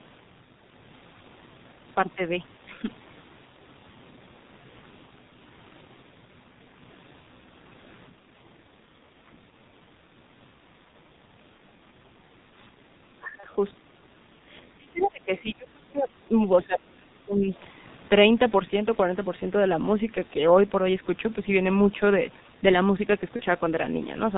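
Throughout, the G.723.1 codec at 6.3 kbit/s heavily muffles and roughens the speech. The spectrogram shows almost nothing above 4 kHz, and the consonants are smeared.

At 13.40–13.46 s, VoIP packet loss concealed by the speech codec causes a brief stretched, fading smear, consistent with one lost 30 ms frame. It appears as a flattened, overly regular patch in the spectrogram.

From 14.62 to 16.13 s, speech is suppressed in double talk, likely because both sides talked at once. The level dips by roughly 30 dB in places, which shows as gaps and hollowed-out stretches in the waveform.

At 14.97–15.07 s, the other side's voice leaks through, likely loudspeaker echo the canceller missed. It is faint, about 25 dB below the speech, and shows as a weak separate trace.

The same suppression recurs at 16.66–17.50 s, likely from overlapping talk again. It shows as another sharp drop in the envelope.

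At 23.36–23.42 s, another short concealed packet loss produces the same brief fade, consistent with a single lost 30 ms frame.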